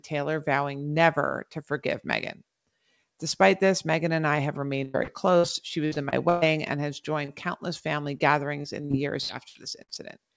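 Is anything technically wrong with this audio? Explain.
Yes. The speech has several packet-loss faults heard through a call codec, whose band stops at 8 kHz, which fits G.722.

A burst of packet loss hits at 4.84 to 4.96 s, right after "and I have", and again at 5.38 to 5.45 s. About 100 ms and 60 ms went missing. The receiver stretched the last sound and faded it. This gives a held buzz or fading hiss, then a jump ahead.

Short concealed packet loss occurs at 5.04 to 5.10 s, 7.25 to 7.30 s and 8.18 to 8.22 s. The second falls between "and has" and "countless family". Only 20 to 40 ms was lost each time. The decoder patched each hole and blended back. It is heard as a brief smear or wobble.

Repeated packet loss with a robotic sound covers 5.85 to 6.43 s, ending just before "and has". Four gaps there take up about 38% of the span, the longest 118 ms. It returns at 8.62 to 9.90 s with seven gaps, the longest 70 ms. 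Each patch is followed by another hole. The speech turns choppy, with pieces missing.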